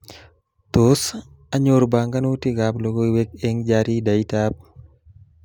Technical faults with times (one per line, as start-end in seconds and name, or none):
none